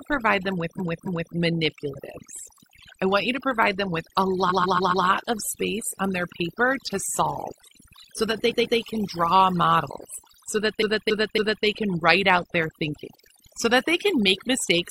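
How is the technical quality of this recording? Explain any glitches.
The recording has two clear problems: overly aggressive noise removal across the whole clip, and stuttering repeats in four places.

The overdone noise removal runs throughout. The reducer pushes down any frequency band near its noise estimate and takes quiet parts of the speech with the noise. The background drops and breaks up into twinkling specks.

Repeated frames occur at 0.75–1.30 s after "provide them", 4.46–5.02 s after "provide them with a", 8.46–8.73 s, and 10.78–11.61 s after "draw models so that". Blocks of compressed audio were played again, so a 278.6 ms or 139.3 ms chunk loops two to four extra times. This is heard as a stutter.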